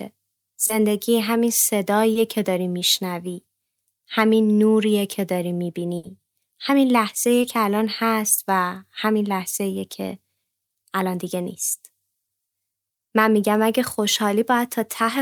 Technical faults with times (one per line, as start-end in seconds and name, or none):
0.67-0.71 short concealed packet loss
2.13-2.17 short concealed packet loss
5.97-6.05 burst of packet loss
7.41-7.45 short concealed packet loss